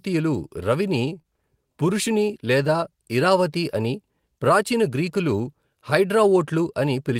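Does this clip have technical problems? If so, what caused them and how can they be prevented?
Yes, there's one glitch in this speech clip: a short stall from a late packet, running from about 1.21 to 1.27 s. A packet showed up late, the jitter buffer ran dry, and the receiver padded the gap by stretching the last bit of sound for about 25 ms. Nothing's actually lost. It resumes right where it left off, just 25 ms later, so you hear a slightly held sound with a faint buzzy dip. A bit more jitter-buffer headroom or a steadier network path would have absorbed that late packet.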